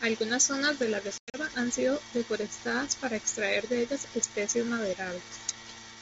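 From 1.18 to 1.38 s there is packet loss on an ADPCM call: about 140 ms of sound drops to digital silence across a 160 ms stretch, the longest gap lasting 100 ms, which points to several consecutive packets going missing. On a waveform these appear as flat, hard-edged holes; on a spectrogram they are blank vertical bands. When the sound resumes, the decoder's predictor and step size no longer match the sender's, so it comes back slightly distorted before settling within some tens of milliseconds, a short smear at each re-entry edge. The G.722 wideband coding carrying the call is audible as content extending up to 7 kHz.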